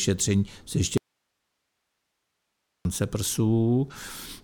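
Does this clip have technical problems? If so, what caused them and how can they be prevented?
Yes. From 0.98 s to 2.85 s there is an audio dropout to a faint residue: the speech cuts off abruptly for about 1.9 s and only hiss remains, roughly 55 dB below the speech level. That hiss shows the downstream path stayed live. A natural pause or fade would taper, and a dropout to digital silence would leave no floor at all. The likely cause is a momentary break upstream, such as a loose cable, a failing connector or a brief wireless-link loss. To prevent it, secure and test connectors and wireless links before recording, and monitor the feed live.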